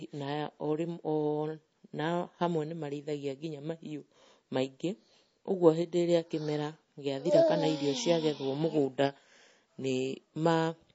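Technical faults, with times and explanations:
Throughout, MP3 compression: nothing above 7.7 kHz, and the speech has a plainly audible watery swirl as faint detail flickers in and out between frames. This is likely a starved encoder cutting treble and dropping weak components, which fits roughly 32 kbps.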